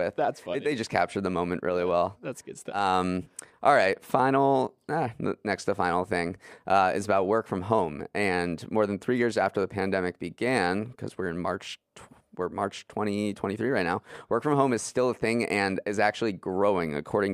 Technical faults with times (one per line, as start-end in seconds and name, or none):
0.00-17.33 resampler restarted on every block